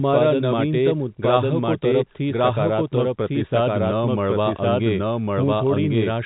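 Speech heard through a telephone-band channel, with nothing above about 3.9 kHz, carries a doubled audio track throughout: a second copy, about as loud as the first, trails by roughly a second with no decay or room colour. Its likely cause is a slower second capture path. On a spectrogram each band-limited syllable pattern repeats about a second later, and the waveform shows matching envelopes stacked out of step.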